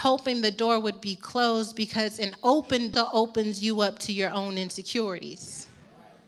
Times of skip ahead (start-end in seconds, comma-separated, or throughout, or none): 2.93-2.95